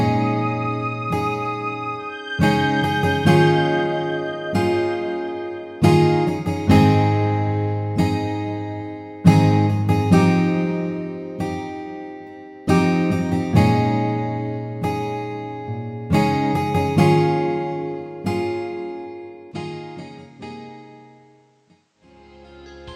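An input switched to a poorer device at 19.52 s and stays until the end at 22.95 s: the audio abruptly turns duller and quieter, with no gap at the changeover. Nothing remains above 9.2 kHz, the level falls by roughly 10 dB, and a different, faint background noise appears about 40 dB under the signal. The likely cause is the system changing to another microphone or a headset's narrower call path mid-recording.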